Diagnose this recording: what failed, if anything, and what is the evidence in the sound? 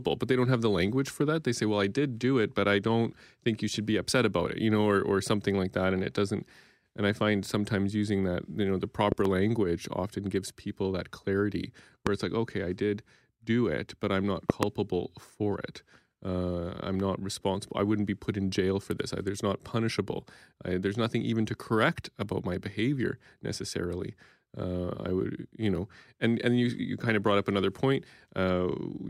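Five loud pops, in three bursts, cut through the speech. At 9.12 to 9.28 s there's a double pop about 15 dB above the signal, at 12.07 to 12.09 s a single one about 20 dB up, and at 14.50 to 14.65 s another double at about 20 dB. The speech carries straight on underneath each one. That points to the analogue wiring stage, likely a flaky plug, switch or static discharge dumping a voltage step into the line, which the following circuitry turns into a sharp thump.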